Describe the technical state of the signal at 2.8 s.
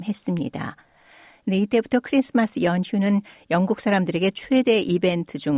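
At 2.8 s the signal is intact, with no dropout, clipping, distortion or other audible fault at that moment.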